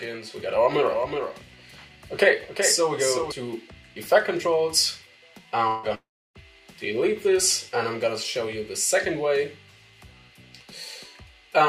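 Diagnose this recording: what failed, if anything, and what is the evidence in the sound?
A doubled audio track runs from the start until 3.32 s: one full-band copy trails the original by about 400 ms at about 5 dB lower. Unlike room echo, it has no decay or reverberant colour and stops abruptly, likely from a second, slower capture path being mixed in.

A long network dropout occurs twice, likely from packet loss. At 5.67 to 5.86 s, 160 ms goes missing, covered by a fading buzz or hiss. At 5.95 to 6.38 s, 400 ms is lost, with the fill giving way to about 300 ms of silence. Unlike a brief glitch, sound resumes without the lost material.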